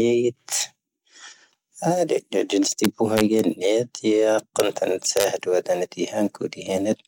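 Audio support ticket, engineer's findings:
Integer overflow at 2.84–3.39 s, 4.60 s and 5.17–5.24 s: loud speech peaks wrap to opposite sign instead of limiting, giving sharp cracks. Probable gain or summing stage lacking saturation.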